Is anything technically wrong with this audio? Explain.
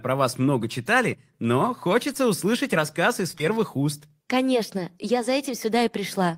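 Yes. The speech has short concealed packet loss at four points: 2.13 to 2.17 s, and then 3.31 to 3.35 s, 3.35 to 3.38 s and 3.38 to 3.55 s in a run. Each time about 20 ms of the call arrived too late to decode. The receiver covered each gap by extending the preceding sound, using its pitch or shaped noise, and then blended back. The last gap also stretches the timing slightly. These spots sound like brief smears or wobbles, and a short consonant may drop out.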